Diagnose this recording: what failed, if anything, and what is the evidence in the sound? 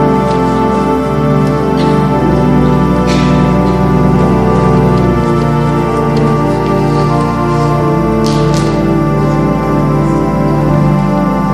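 Hard clipping throughout, at a converter or format stage: about 6 dB of overdrive flattens a small fraction of peaks, giving crackle on loud moments rather than soft, rounded saturation.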